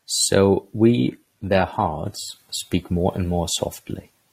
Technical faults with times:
0.89-2.89 adaptive stream at a lower bitrate

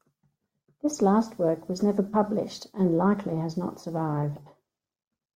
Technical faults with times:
none

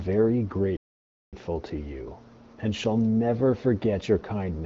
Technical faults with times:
0.77-1.33 playback stall

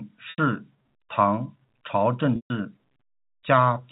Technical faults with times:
0.30-0.38 packet loss with pitch repetition
2.36-2.50 packet loss with pitch repetition

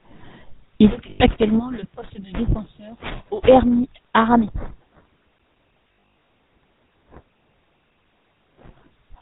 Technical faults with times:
0.00-9.21 GSM full-rate codec
1.10-1.21 lost GSM frames
5.88-6.28 lost GSM frames

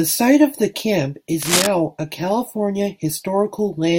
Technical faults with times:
1.42-1.67 cable scratch noise

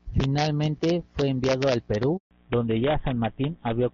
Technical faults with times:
0.00-3.94 integer overflow
2.17-2.31 handover gap
2.31-3.94 fallback to narrowband

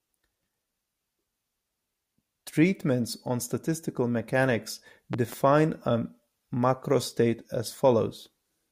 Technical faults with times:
5.13-5.35 loud pop

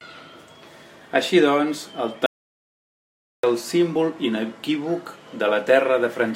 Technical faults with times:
2.26-3.43 audio dropout to silence

